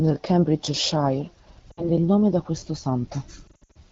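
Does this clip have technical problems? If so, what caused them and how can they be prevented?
Yes. Lost AMR speech frames are the problem: radio errors corrupted frames, and the decoder papered over each gap by repeating the last good pitch and vocal tract settings at falling gain. At 1.72 to 1.89 s, about 60 ms goes missing just before "il nome da questo," heard as a smeared, sagging patch. At 3.48 to 3.77 s, about 200 ms is lost in short bursts, the longest 60 ms, giving a warbling, stuttering stretch. The wideband codec underneath sounds clean, fitting a 12.65 kbit/s AMR-WB mode. Stronger radio coverage or more robust channel coding would prevent these losses.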